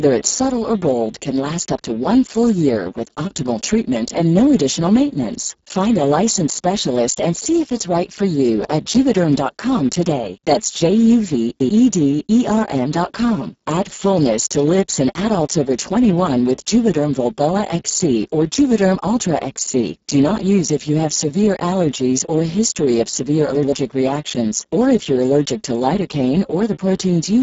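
A speech recording carried through the Speex codec at heavy damage for its whole length. The voice sounds hoarse, buzzy and at times robotic, which points to a very low bitrate of around 6 kbps. Content stops at 7.6 kHz, and the upper band sounds like shaped hiss rather than real detail. This separates it from plain low-pass filtering or a narrowband telephone line: the harmonics themselves are rough and noisy, not just dulled.

Chunks out of order occur from 11.35 to 11.69 s and again from 23.55 to 23.72 s. In each case a slice of about 85 ms plays after material that should have followed it, about three chunk-lengths late in the first event and one in the second. The result is a brief jumbled moment at the hard joins. Unlike a dropout or packet loss, nothing goes silent or missing; the sound is only shuffled.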